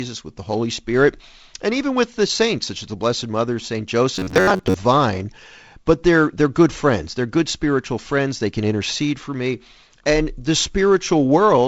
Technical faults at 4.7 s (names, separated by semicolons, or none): robotic sound from repeated short buffers